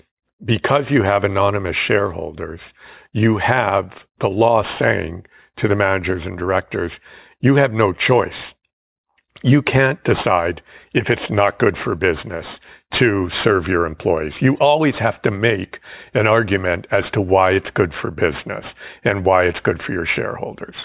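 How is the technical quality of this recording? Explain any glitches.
The recording has one real problem, and it runs the whole way through: aliasing. It sounds like the audio was resampled down to 8 kHz with no anti-aliasing filter first, so everything above the 4 kHz fold point got mirrored back down into the band as unrelated tones instead of being removed. On this speech that gives the sibilants a gritty, metallic edge, with the folded junk sitting around 20 dB below the voice, and the top end runs hard right up to 4 kHz.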